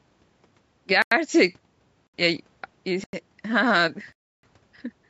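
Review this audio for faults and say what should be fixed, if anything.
Four blocks of digital silence: 1.02–1.12 s, 2.07–2.14 s, 3.04–3.13 s and 4.13–4.43 s. Sound cuts out with no fade; the 93 ms gaps fit an unfilled 4096-sample buffer. Give the audio thread more headroom or a larger buffer so output is always filled in time.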